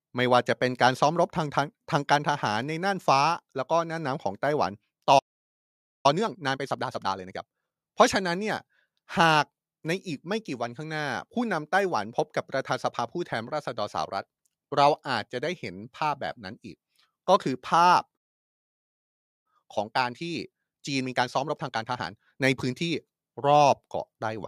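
At 5.18 s the speech cuts out for about 0.86 s, a playback stall, likely from the player running short of buffered data or its thread being blocked; the sound halts mid-flow in silence. From 6.06 to 7.76 s a time-compressed catch-up follows, the player clearing its backlog by splicing out short segments and cross-fading the joins, so the speech runs 1.5 times faster at unchanged pitch. A second stall at 18.16 s silences the output for about 1.28 s, again likely a buffer underrun or blocked thread, and the catch-up from 19.46 to 22.46 s plays at 1.25 times speed.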